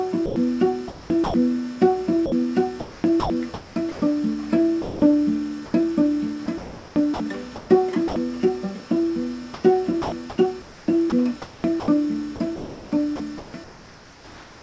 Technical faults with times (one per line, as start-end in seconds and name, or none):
0.26-0.36 sound dropped by the voice detector
0.88-1.34 comfort noise in place of the background
1.24-1.34 sound dropped by the voice detector
2.26-4.02 sound chopped by the voice detector
4.82-5.02 sound dropped by the voice detector
5.66-5.74 comfort noise in place of the background
6.46-8.16 sound chopped by the voice detector
9.54-14.62 sound chopped by the voice detector